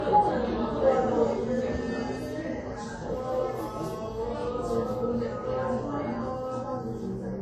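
Throughout, nothing is heard above about 14.9 kHz, and two kinds of coding artefact sit on top of each other. This is likely transcoding between lossy codecs. The sound fits a WMA pass near 64 kbit/s, then Vorbis near 36 kbit/s, compounding their artefacts.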